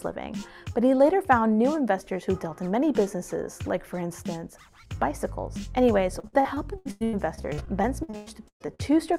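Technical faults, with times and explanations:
6.19–8.81 s: repeated packet loss (robotic sound). The audio turns choppy as stretches of sound repeatedly drop out and are bridged by stretching the last sound forward. About a third of this span is patched this way, with the longest gap 118 ms.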